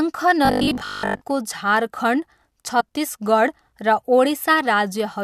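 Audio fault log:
0.45–1.23 s, robotic sound from repeated short buffers: new audio likely arrived too seldom, so a short chunk of about 20 ms was replayed through most of the stretch, imposing a rigid, metallic 50 Hz buzz.
2.79–2.81 s, compressed frames skipped: a single 21.3 ms frame was never played, so the sound jumps ahead about 20 ms.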